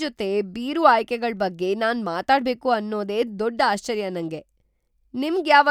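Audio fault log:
No faults are heard in this speech recording. Nothing in it calls for an entry in the log.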